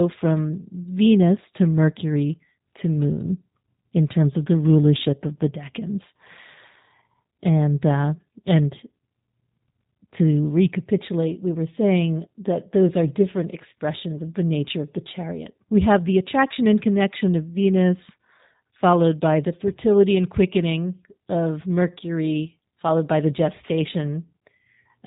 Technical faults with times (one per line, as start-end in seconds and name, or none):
0.00-25.07 G.729 codec